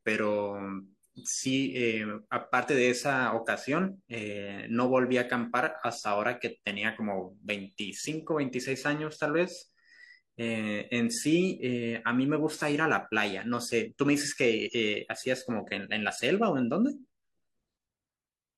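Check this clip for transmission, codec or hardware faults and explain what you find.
One fault is present: damaged data in a compressed stream at 14.63 to 14.70 s. Corrupted bytes made the decoder misread frames and resynchronise, producing a brief glitch in the speech.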